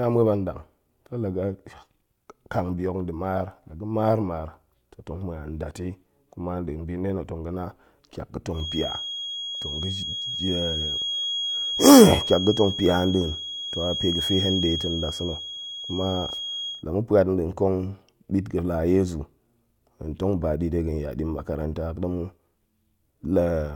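A loudspeaker-to-microphone loop likely sat right at the edge of feedback from 8.51 to 16.85 s, producing a feedback whistle: a thin, steady 3.3 kHz tone that holds just below the speech level without running away, swelling and fading slowly in loudness.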